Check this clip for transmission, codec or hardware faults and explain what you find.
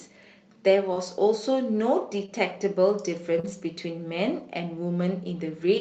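One transmission fault shows up: scattered short gaps between 0.93 and 3.53 s. About three small dropouts land in that stretch, the longest around 40 ms. About 80 ms of audio went missing in all. The receiver covered each hole by extending the last sound, and about 140 ms was rebuilt. Each patch sounds like a brief tick, smear or hiccup in the speech. The call codec also limits the band to near 8 kHz.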